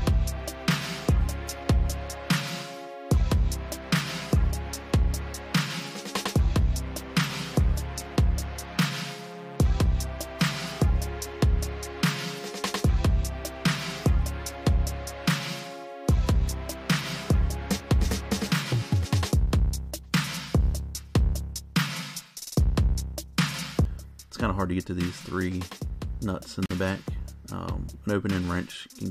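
A gap at a join of encoded pieces opens from 26.66 to 26.71 s. A gap of about 46 ms cuts the sound, then it resumes where it stopped. Encoder delay and end padding were left in.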